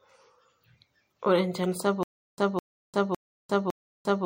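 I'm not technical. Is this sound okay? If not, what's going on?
No, there are two problems. Throughout the speech there is plainly audible MP3 compression damage, likely from saving the file at too low a quality. It sounds watery and swirly, with a dull top end and hissy s sounds that chirp or warble. What sets it apart from a simply muffled recording is that the damage flickers and moves from moment to moment, because faint details keep switching on and off.

From 2.03 s to the very end there is a stutter with silent gaps, likely from the player or stream stalling and retrying. The same short piece, about 0.21 s long, plays again four times, each followed by about 0.35 s of dead silence, so it returns every 0.56 s. Unlike ordinary dropouts, where new audio resumes after each gap, here the identical fragment keeps coming back, and the speech that should have followed is lost.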